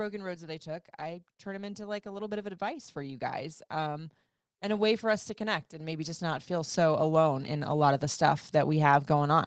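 From 0.64 s to 8.93 s, automatic gain rising lifts the level by about 17 dB. The gain control judged the input too quiet and kept raising it, so speech and background noise swell together. That shared swell separates it from a talker moving closer. The call path keeps everything below about 8 kHz.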